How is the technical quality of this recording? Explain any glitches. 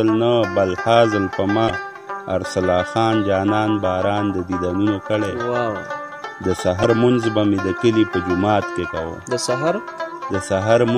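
Two brief glitches interrupt the recording, both from damaged data in a compressed stream, at 1.66 to 1.71 s and 6.81 to 6.86 s, each lasting about 50 ms. At those points the encoded data was corrupted, so the decoder could not make sense of the affected frames, lost its place, and had to hunt for the next valid frame header before playback could resume. Each event is heard as a short chirp, squawk, click or short hole cutting across the sound.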